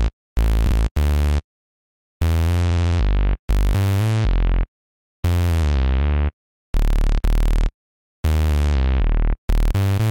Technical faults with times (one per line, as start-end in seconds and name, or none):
0.65-0.74 repeated frames